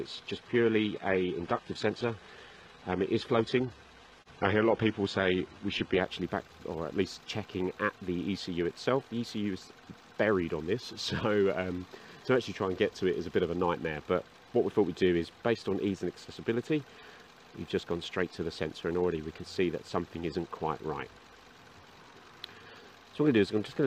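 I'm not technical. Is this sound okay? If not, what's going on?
No. For the first 6 seconds this is an adaptive stream starting at a low bitrate. The player began on a lower-quality version to start quickly, so the sound is dull, with nothing above 11.8 kHz. At 6.0 s it suddenly becomes clearer, with no gap.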